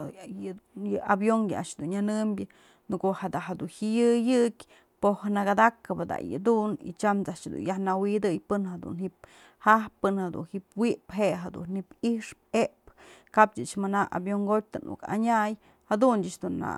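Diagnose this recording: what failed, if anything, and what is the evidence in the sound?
Nothing failed: listening across the whole speech recording turns up no audible fault at any stage of the chain.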